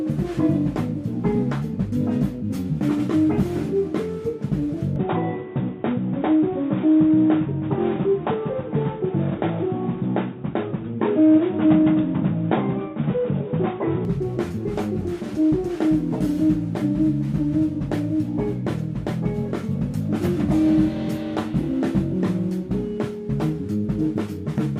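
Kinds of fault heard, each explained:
Input switched to a poorer device: from 4.96 to 14.05 s the sound turns dull and boxy, with nothing above 3.8 kHz and a faint new background noise, but no gap or level jump. The input likely moved to a narrower-band microphone, then back.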